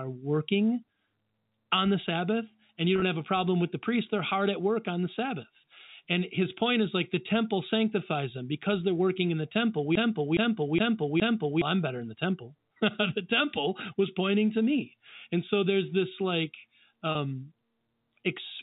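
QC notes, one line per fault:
2.94–3.02 s, packet loss with pitch repetition: after "the sabbath and you", about 50 ms of audio drops out in short gaps across 80 ms, the longest 20 ms, which fits five 10 ms packets. Each gap is filled by repeating the last pitch period, so the sound briefly holds on a buzzy tone before "have a problem with". On a spectrogram, the harmonics run flat and unchanging across each gap.
9.95–11.62 s, broken-record loop: after "in the temple we", a 0.42 s fragment plays four times back to back. This likely comes from a stalled player or stream re-sending its last buffer, and the audio that belonged there is lost before "i'm better in the". The waveform shows identical blocks repeating at a steady 0.42 s spacing.
17.12–17.15 s, packet loss with pitch repetition: right after "so there's this like", about 30 ms is lost, which fits three 10 ms packets. It is bridged by a repeated pitch cycle that sounds like a brief held buzz. 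On a spectrogram, the harmonic stripes freeze flat for that short stretch.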